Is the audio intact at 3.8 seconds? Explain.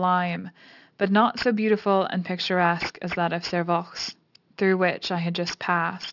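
No. Aliasing is present at 3.8 s, as it is across the whole clip. The speech was brought down to a lower sample rate, which fits a drop from 48 kHz to 12 kHz, without filtering first, so energy above 6 kHz folds back below that edge at the wrong, unrelated pitches. Sibilants come out gritty and metallic, the spectrum stays full right up to 6 kHz, and the folded content sits only about 15 dB under the speech.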